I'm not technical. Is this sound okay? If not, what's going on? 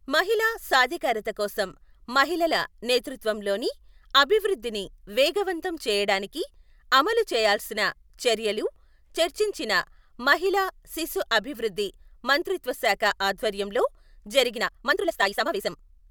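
No. From 14.53 s to the end, software likely squeezed the speech into less time. This time-stretched section runs nearly twice as fast, rushed, with unchanged pitch.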